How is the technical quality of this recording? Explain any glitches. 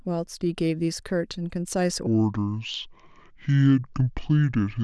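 The recording has one clear glitch: from 2.07 s to the end at 4.84 s, there is a section at the wrong speed. The speech suddenly slows to 0.61 times its proper rate, so pitch drops by about ten semitones and the voice turns deep and dragging. This likely comes from that stretch being played or resampled against the wrong clock. On a spectrogram, harmonics and formants shift abruptly downward and syllables stretch wider; the waveform's cycles and word envelopes lengthen visibly from 2.07 s onward.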